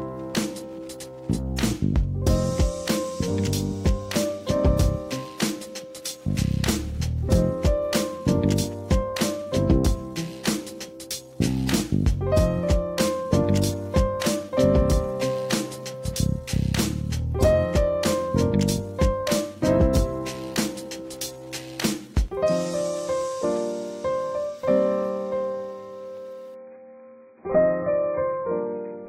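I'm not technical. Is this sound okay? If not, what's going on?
No. Near the end, from 26.54 s to 29.08 s, the clip switches to an adaptive stream at a lower bitrate. The stream dropped to a much smaller, lower-quality version, most likely because the connection slowed. Everything above about 2.5 kHz vanishes, so the sound turns dull and muffled, with a smeared, artificial texture. The change happens suddenly, with no silence or gap.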